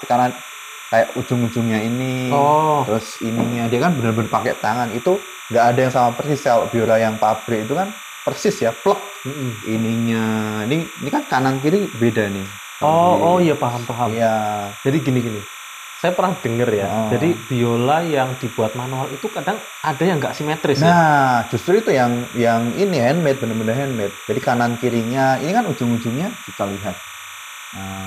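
Linear timecode, which fits a 29.97-frame rate, leaks into the audio throughout as timecode bleed, adding a steady chirping warble near 1 and 2 kHz, roughly 15 dB below the sound.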